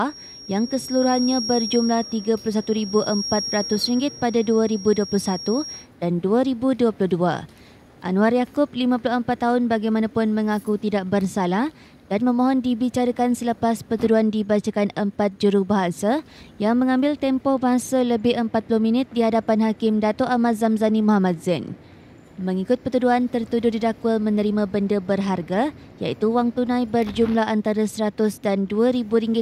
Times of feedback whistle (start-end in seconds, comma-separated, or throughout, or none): 0.00-5.88